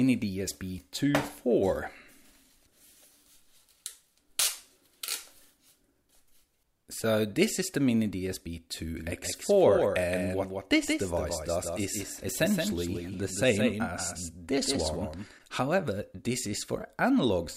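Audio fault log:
8.97–15.31 s, doubled audio track: a full-band copy of the sound trails the original by around 150 ms at roughly 5 dB lower, with no decay or room colour, and cuts in and out abruptly. This is likely a second, slower capture path or an out-of-step edit.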